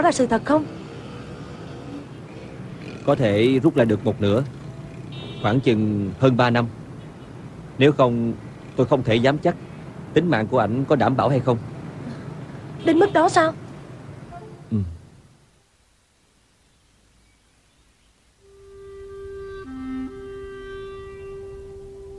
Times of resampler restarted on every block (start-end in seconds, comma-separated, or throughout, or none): 1.16-5.32